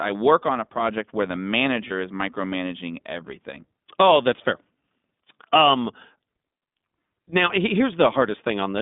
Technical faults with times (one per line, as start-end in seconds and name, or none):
0.00-8.81 iLBC codec
1.88-1.92 lost iLBC frames